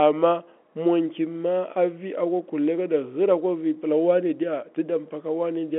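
No faults here; just ordinary telephone-band speech.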